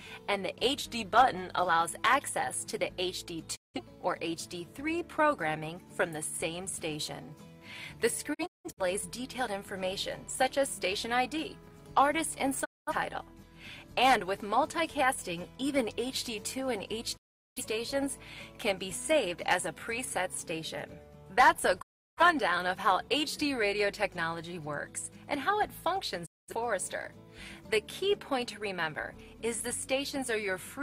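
From 0.76 to 1.65 s the audio slows by 5.4% and drops nearly a semitone (about 96 cents) before snapping back, likely a gross drift correction step; spectrogram harmonics step down, then return. Digital broadcast dropouts mute the sound at 3.55, 8.33 (scattered holes across 0.43 s), 12.64, 17.16, 21.81 and 26.25 s, each fading out over 20 ms. Losses run 0.17 to 0.38 s and show as blank vertical gaps.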